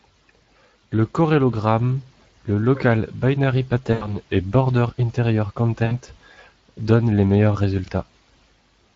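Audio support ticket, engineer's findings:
Speex codec, whole clip: hoarse, grainy texture on speech throughout, plainly audible. CELP excitation short of bits; bitrate points to roughly a 20 kbps mode.

VoIP packet loss concealed by the speech codec: 3.93–4.17 s, just after "corellogramme le local binary", and 5.85–5.97 s. About 80 ms and 60 ms missing. Decoder stretches last pitch and filter into fading buzz or coloured noise, slow recovery after.

Chunks out of order: 7.84–7.88 s, right after "donnent les meilleurs". One 20 ms chunk plays one slot late, giving a brief jumbled moment across three hard joins. Likely buffering or write-order fault.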